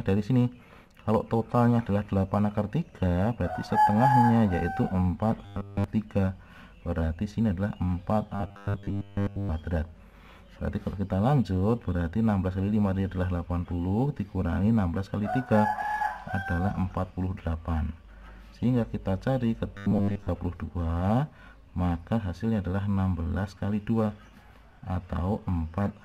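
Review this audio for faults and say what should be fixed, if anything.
Audio likely arrived too seldom, so a short buffer was replayed: robotic sound from repeated short buffers, a rigid 100 Hz buzz fitting 10 ms buffers, at 5.45–5.84 s (fully repeated), 8.35–9.50 s and 19.75–20.28 s (mostly repeated). Prevent it with a deeper jitter buffer and steady delivery.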